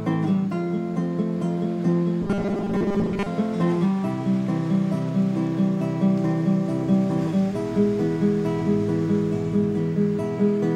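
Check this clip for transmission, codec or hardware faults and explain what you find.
One fault shows up: robotic sound from repeated short buffers, 2.22 to 3.27 s. Most of that stretch turns into a rigid, metallic 200 Hz buzz. The likely cause is audio arriving too late, with roughly 5 ms chunks looped to cover the gap, which fits a 5 ms buffer.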